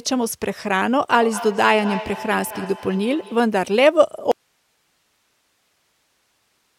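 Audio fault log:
1.2–3.64 s, feedback echo between two devices. The speech comes back at a steady interval of about a fifth of a second, repeating and turning thinner and more ringing each pass. The loudest repeat sits about 12 dB below the speech. This points to a second device in the room replaying the call into a microphone whose echo canceller cannot remove it.
4.32 s to end, audio dropout to a faint residue. The speech cuts off abruptly and does not return. Only hiss remains, roughly 45 dB below the signal. The likely cause is the source being lost while the path after it stayed live, passing its own noise.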